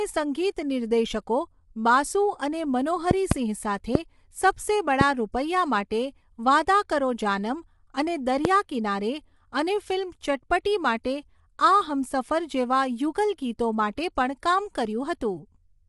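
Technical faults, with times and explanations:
Throughout, low-delay AAC compression: the speech is plainly rough and grainy, with noise filling the gaps between harmonics and nothing above 11.6 kHz. This is likely AAC-ELD, whose coarse quantisation of each short frame fits a bitrate of about 32 kbps.
3.11 to 3.34 s (two pops), 3.95 to 3.97 s, 5.01 to 5.03 s and 8.45 to 8.47 s, loud pop: five sharp pops in total, each around 20 dB above the speech, which carries on underneath. The likely cause is a sudden voltage step or pulse, shaped by the circuitry that follows.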